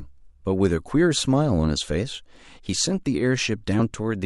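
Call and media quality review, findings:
Compressed frames skipped at 3.79 s in the speech. A jump where roughly 50 ms of audio is jumped over, about two frames of 23.2 ms, which fits frames missing or rejected at the decoder. Spectrogram: an abrupt shift in harmonic pattern. Waveform: mismatched envelope at the splice.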